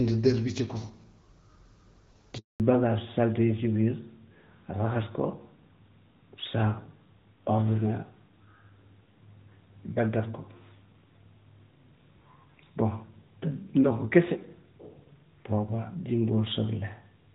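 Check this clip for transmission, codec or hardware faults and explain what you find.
Two faults occur together near the start, with the second lasting to the end.

From 2.38 to 2.60 s there is a handover gap: while the call switches networks, no speech frames arrive, so the sound fades within a few tens of milliseconds into 220 ms of plain silence. Unlike packet-loss concealment, nothing is smeared or repeated across the hole.

From 2.60 s onward there is a fallback to narrowband. After the switch, the call leaves AMR wideband, heard earlier at quality fitting 12.65 kbit/s, for narrowband AMR, likely near 12.2 kbit/s. Everything above 4 kHz vanishes and the audio turns duller. Because the change begins exactly at the gap, it points to a codec switch rather than a filter.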